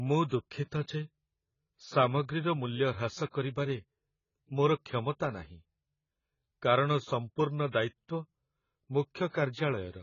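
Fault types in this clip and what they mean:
AAC compression: The speech sounds dull and smeared throughout, with nothing above 7 kHz and a warbling, fizzy texture on sustained sounds and sibilants. This is likely heavy AAC-LC coding at a very low bitrate, around 16 kbps, lowering the cut-off and leaving spectral holes.
Pre-echo: A short hiss comes just before sharp attacks, spanning 3.30 to 3.34 s (34 ms) and 9.29 to 9.34 s (54 ms), and the onsets sound softened. The codec spreads quantisation noise across each block, so noise meant for the loud attack fills the quiet moment before it.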